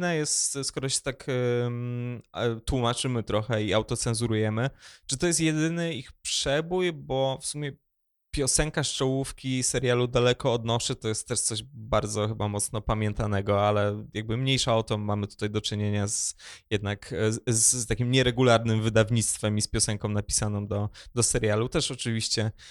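No technical faults can be heard anywhere in the recording; the speech signal stays steady and intact throughout.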